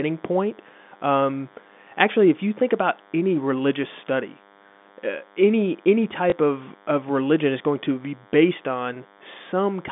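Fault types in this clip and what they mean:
DECT cordless phone buzz: A nearby DECT unit's radio bursts, 100 per second, get rectified. A thin, harmonic-rich buzz sits well below the speech throughout.
Packet loss with last packet repeated: At 6.3 s, one 20 ms packet was lost and the previous one replayed. The single repeat sounds like a small blip.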